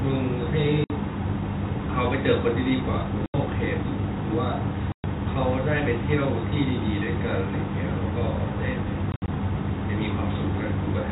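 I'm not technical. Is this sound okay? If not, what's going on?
No. Two kinds of thing go wrong in the call system.

Packet loss filled with silence: pieces of the audio never arrived, and the receiving end played nothing in their place. You hear sudden holes with hard edges at 0.84 s (60 ms), 3.26 s (80 ms) and 4.92 s (120 ms). From 9.12 to 9.28 s several short gaps are clustered together. The gap lengths fit pieces of 20 ms each.

Feedback echo between two devices: from 7.1 s to the end, two devices in the same room seem to be on the call, each re-sending what the other plays. The speech comes back as a quieter, thinner repeat roughly every fifth of a second.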